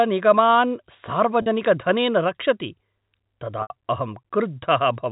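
Packet loss with pitch repetition occurs at 1.42 to 1.46 s and again at 3.62 to 3.70 s. Audio went missing for 40 ms, then 80 ms, which fits two and four 20 ms packets. The receiver looped the last pitch period: the first gap sounds like a brief buzzy hold, while the longer one fades toward silence before the speech cross-fades back in.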